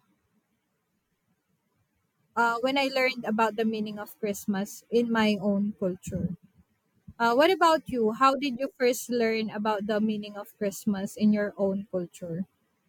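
Nothing goes wrong anywhere in this speech recording, so there's no technical fault to point to at any moment.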